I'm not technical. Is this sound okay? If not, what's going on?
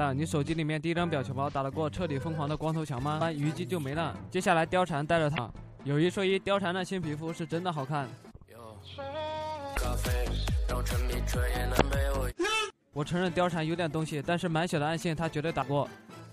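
No. There are four brief glitches, at about 3.18, 5.34, 9.73 and 11.77 s, each lasting roughly 40 milliseconds. That's damaged data in a compressed stream: some of the data got garbled, so the player stumbled and lost its place.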